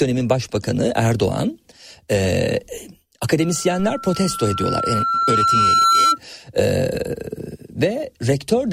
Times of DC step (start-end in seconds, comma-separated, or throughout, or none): 3.80